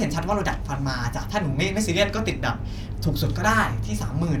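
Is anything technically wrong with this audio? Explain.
No, nothing is technically wrong.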